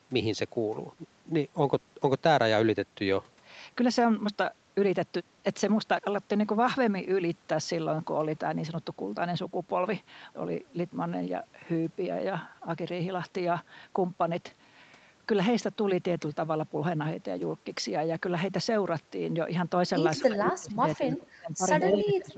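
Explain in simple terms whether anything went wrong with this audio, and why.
A few things did go wrong. Near the start, at 0.95 to 0.99 s and again at 1.79 to 1.83 s, there's short concealed packet loss: tiny bits of the call arrived too late, and the receiver patched each gap by stretching the previous sound, so you hear a quick smear or wobble.

From 20.19 s to the end, the talker gets pushed down hard, sometimes nearly gone. That's speech suppressed in double talk, likely because both people spoke at once and the echo canceller, unable to tell them apart, turned everything down.

Right inside that stretch, around 21.94 to 21.99 s, a brief scrap of the voice comes back about 0.2 s late and not much quieter than the original. That's an echo leak, likely a loudspeaker's sound slipping past an echo canceller and getting sent back.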